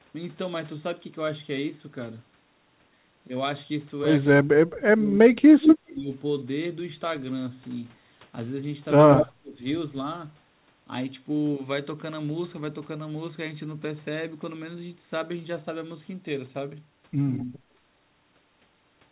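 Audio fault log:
4.37–6.08 s, speech suppressed in double talk: the level dips repeatedly while both sides overlap, about 1.5 s affected in total, with the deepest drop about 35 dB. Likely cause: the echo canceller could not separate the local talker from loudspeaker echo and attenuated everything.
9.22–9.61 s, speech suppressed in double talk: a shorter dip of about 0.4 s, down by about 30 dB, beginning just before the echo burst at 9.11 s ends.
5.62–5.73 s, echo leak: a delayed copy of the sound returns 146 ms late, at about the same level as the direct signal. Likely cause: residual loudspeaker pickup that the echo canceller failed to remove.
9.11–9.27 s, echo leak: the same 146 ms delay, about 5 dB below the direct signal.
17.32–17.45 s, echo leak: the same 146 ms delay, faint at about 20 dB down. The constant delay across all three points to one fixed echo path. Everything above 4 kHz is absent, consistent with a narrowband call path.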